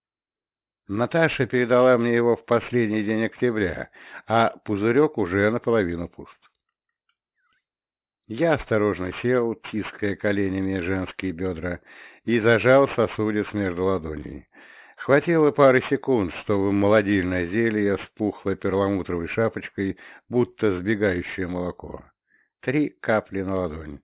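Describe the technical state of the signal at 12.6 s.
At 12.6 s the signal carries aliasing, present across the whole clip. Downsampling to 8 kHz without filtering folded content above 4 kHz back down. High sounds turn gritty and metallic, with alias products around 25 dB below the signal.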